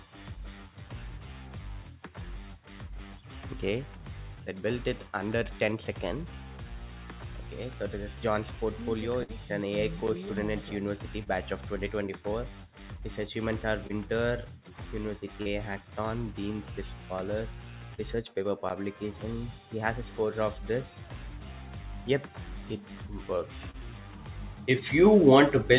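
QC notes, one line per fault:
9.23–9.31 s, burst of packet loss: about 60 ms of audio dropped; the receiver stretched the last sound into a fading buzz or hiss, then jumped ahead.
11.23–11.29, 13.87–13.92, 15.42–15.48, 17.94–18.01 and 23.71–23.76 s, short concealed packet loss: roughly 30 ms lost each time, patched by extending the previous sound, so you get brief smears or wobbles over audio already capped near 4 kHz.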